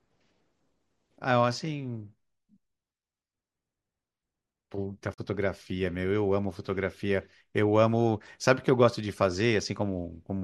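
Damaged data in a compressed stream appears from 5.10 to 5.19 s, interrupting the speech for under a tenth of a second. In that stretch the encoded bytes arriving at the decoder were wrong, whether lost, zeroed or overwritten, so the frames there could not be read correctly. The decoder drops sync and hunts for the next valid frame header, and the garbled output comes through as a chirp, squawk, click or short hole breaking the flow of the speech.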